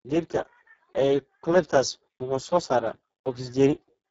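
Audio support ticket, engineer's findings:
Speex codec damage across the whole speech clip, start to finish. Heavy: hoarse, noisy, edging toward robotic, so the excitation is clearly starved of bits. Sounds like a low-bitrate mode, around 5.8 kbps. Top end stops near 7.7 kHz, and what's above 4 kHz is just a shaped noise fill rather than real detail. Likely a Speex VoIP or game-chat leg set to a low quality level. Worth bumping the quality setting first.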